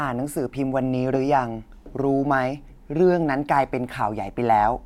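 No technical faults can be heard in this recording.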